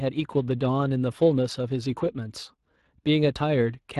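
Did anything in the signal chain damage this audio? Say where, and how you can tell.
Yes: the codec stage. Speex coding throughout leaves the speech plainly hoarse and noisy, which fits a bitrate near 22 kbps, too few bits to model the excitation cleanly.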